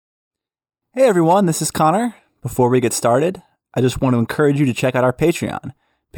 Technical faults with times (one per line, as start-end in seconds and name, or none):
none